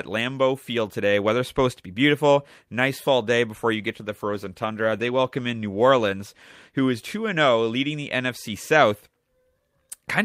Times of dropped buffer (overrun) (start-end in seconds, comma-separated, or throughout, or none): none